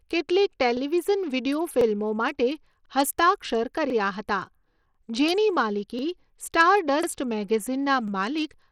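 Overlapping chunks occur in this speech clip at 0.77, 1.81, 2.86, 3.90, 4.95, 5.99, 7.03 and 8.08 s. Each new block of about 1 s begins 44 ms before the previous one ended, so that sliver plays twice and produces a regular stutter roughly every 1.04 s. Bluetooth SBC compression runs throughout, most likely from a low bit pool, which fits roughly 80 kbps. Its coarse sub-band quantisation leaves the treble thin and flickering, with plainly audible gritty noise and aliasing over the speech.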